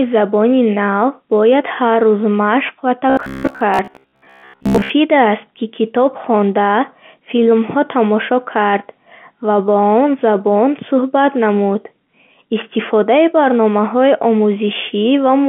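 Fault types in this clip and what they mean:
Robotic sound from repeated short buffers: after "ҳар рӯз машқ ва", the speech turns into a rigid 66.8 Hz buzz, likely from repeating a roughly 15 ms buffer to cover late audio.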